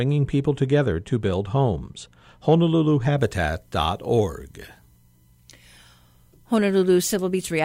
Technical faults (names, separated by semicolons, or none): pre-emphasis left on